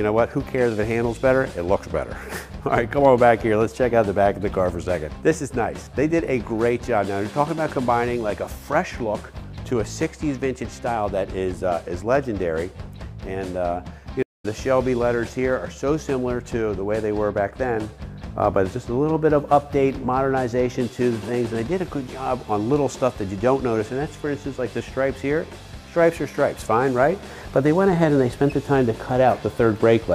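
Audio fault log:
14.23 to 14.46 s, stream reconnect: the audio cuts out for about 210 ms, then comes back roughly 150 ms further along, so a small chunk is skipped. The link dropped and the player restarted its decoder mid-stream, rejoining at a later point.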